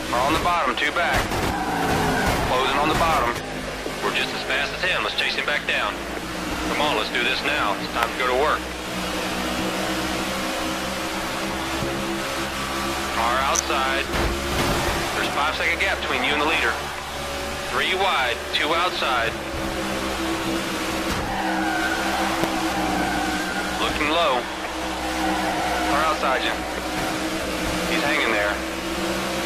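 Sharp snaps at 8.03 s, 13.55–13.59 s and 22.44 s, peaking around -5 dBFS, sit on top of the sound: an electrical switching spike, likely from a nearby switch or motor arcing.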